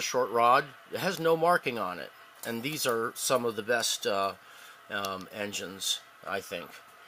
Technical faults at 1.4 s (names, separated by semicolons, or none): none